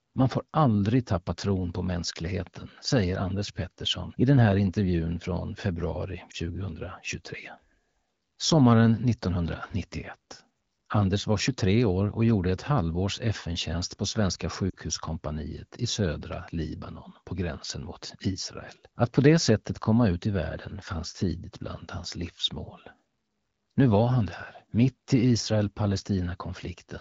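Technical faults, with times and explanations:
6.31–6.36 s and 14.69–14.75 s, lost AMR speech frames: the first dip comes right after "här intervjun från februari" and sounds like roughly one 20 ms frame dropped. The second is a slightly longer dip, more like two frames. Each time, the AMR wideband decoder briefly holds the last good pitch and vocal tract shape at falling gain, so the speech smears for an instant, then recovers.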